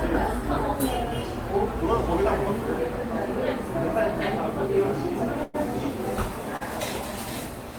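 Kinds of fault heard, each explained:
Call audio freeze: at 5.43 s the sound stops advancing for about 0.1 s and the last moment is carried on as a fading buzz or hiss, not silence. This is likely packets held up in transit draining the jitter buffer. Nothing is lost, and the audio resumes exactly where it halted, now running about 0.1 s later. It lasts longer than the stall below.
Short stall from a late packet: at 6.56 s a single packet arrives late and the final sound is stretched for 41 ms, giving a brief held sound with a slight buzz or dip. The sound then continues from the same point with nothing skipped. It is shorter than the freeze, too brief to fade, and heard as a held sound rather than a gap.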